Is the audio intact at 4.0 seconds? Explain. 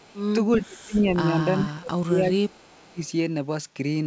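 Yes, the speech at 4.0 seconds is intact, carried through the call path with nothing above about 8 kHz, as that codec passes it, and no fault at that moment.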